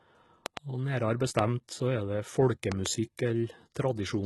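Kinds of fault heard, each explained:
HE-AAC compression: The speech was likely squeezed through HE-AAC at a very low bitrate, which fits roughly 16 kbps. Only the lower spectrum is really coded, and the treble is rebuilt by copying lower bands upward under a coarse envelope. The damage is heavy throughout: the top end is synthetic rather than original, stops entirely at about 11.8 kHz, and s sounds come across gritty, metallic or lispy where the copied harmonics fail to line up.
loud pop: A sudden voltage step or pulse, likely from a plug, switch, static discharge or driver glitch, was added on top of the signal, with the circuits downstream shaping it into a sharp transient. Five pops land in three places, with the speech carrying on underneath. There is a double pop from 0.46 to 0.59 s and a single pop at 1.4 s just before "så er det". Another double follows from 2.72 to 2.88 s just after "så er det". 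Each stands out roughly 15 to 20 dB above the speech.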